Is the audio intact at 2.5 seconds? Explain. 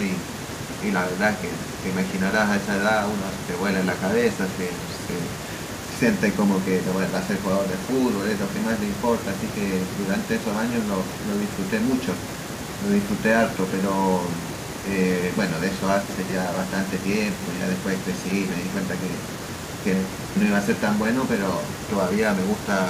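No. At 2.5 seconds, as throughout the clip, there is echo with no canceller. The far end is playing the call through a loudspeaker, its microphone captures that playback, and nothing subtracts it before it returns over the network. The speech is therefore trailed, roughly four tenths of a second later, by a faint copy about 28 dB down, thinner than the direct sound.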